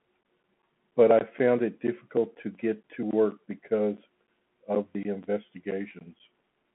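Throughout the clip, Bluetooth CVSD headset codec damage: nothing above 3.8 kHz, scratchy s sounds and granular hiss beneath the speech, unlike a clean telephone band-limit, which stays smooth.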